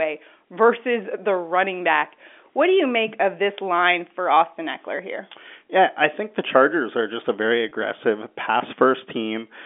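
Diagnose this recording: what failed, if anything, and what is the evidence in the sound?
Packet loss with pitch repetition at 7.69 to 7.71 s, just after "are just a very", a network-stage fault: about 20 ms of audio went missing, consistent with two 10 ms packets, and the receiver bridged it by repeating the last pitch period, giving a brief held, buzzy sound inside the 250 to 3500 Hz telephone band.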